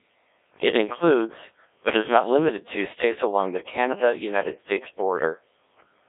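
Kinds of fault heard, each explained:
Codec 2 vocoder: The speech sounds robotic and buzzy throughout, confined to a narrow 300 Hz to 3.6 kHz line band with nothing above 3.8 kHz. At a rate that fits 1.3 kbit/s, only pitch, voicing, energy and spectral shape survive, so the decoder rebuilds the voice from sine waves and heavily smears its natural texture.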